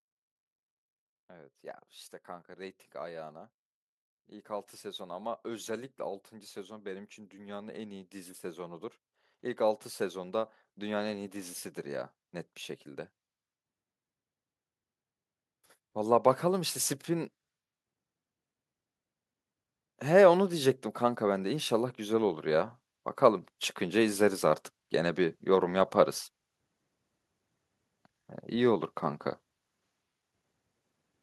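At 4.15 s the automatic gain rising kicks in: the AGC decided the level was too low and ramps up about 10 dB until 12.17 s, so voice and background swell together. It does it again from 20.02 to 25.46 s, about 9 dB.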